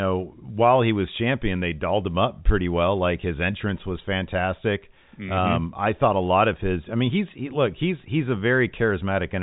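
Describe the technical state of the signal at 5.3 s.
At 5.3 s the speech is intact, with no dropout, click or distortion, only the narrow band of G.711 telephone coding, which leaves nothing above about 3.8 kHz.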